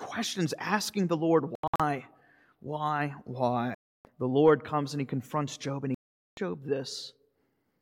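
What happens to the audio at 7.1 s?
Nothing goes wrong at 7.1 s; the speech there carries on intact, with no dropout, click or distortion at that point.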